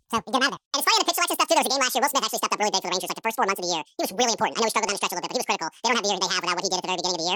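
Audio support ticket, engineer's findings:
Audio read two samples at a time (double speed), whole clip. Speech plays at 2x speed, pitched up 12 semitones (one octave). Probable component: reader/decoder frame-format mismatch, pairs of samples taken as one frame. Spectrogram: formants and harmonics shifted up an octave, events compressed in time. Waveform: syllables half length.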